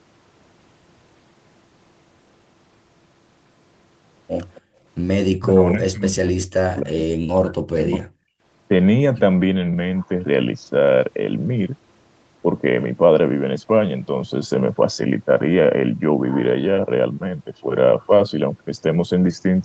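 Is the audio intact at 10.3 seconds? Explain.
Yes, the speech at 10.3 seconds is intact, with nothing more than the ordinary band limit of a call path that stops around 8 kHz.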